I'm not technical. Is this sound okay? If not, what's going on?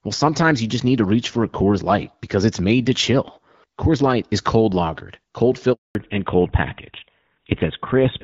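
No. At 5.73 s the speech cuts out completely for about a fifth of a second, until 5.95 s. This is a handover gap: the phone switched networks mid-call, and nothing got through during the switch. From 5.95 s onward the speech sounds duller and rougher, as if heard through an old phone. This is a fallback to narrowband: the call dropped from HD Voice to an older system that removes everything above 4 kHz.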